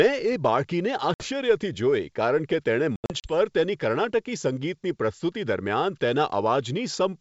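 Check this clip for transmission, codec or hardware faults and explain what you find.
Two stretches of packet loss on an ADPCM call disrupt the speech, carried over G.722 wideband coding at 64 kbit/s. At 1.14 to 1.28 s, about 60 ms drops into hard-edged silence. From 2.96 to 3.34 s, 160 ms goes missing in scattered gaps, the longest 80 ms. After each hole the speech returns with brief, slight distortion. The decoder's adaptive predictor and step size lost track of the sender's and need some tens of milliseconds to resynchronise.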